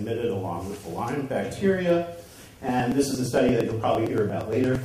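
Periodic USB or driver dropouts run from 2.23 s to 4.75 s, recurring every 115 ms. Something stalls the audio path at a fixed interval, and each time around 10 ms of audio is skipped outright, leaving about twenty evenly spaced ticks through the signal.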